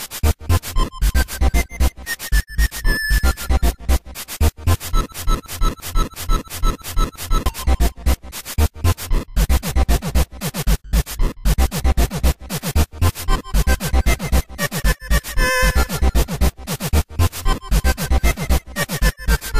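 At 5.12 s the audio locks into a broken-record loop that lasts until 7.46 s. A fragment of about 339 ms replays exactly and back to back, seven times over, giving a rigid stuttering pulse in place of forward progress. The likely cause is a stall in the player, encoder or stream, which kept outputting the last chunk it held. Whatever audio belonged in those two-odd seconds never arrives.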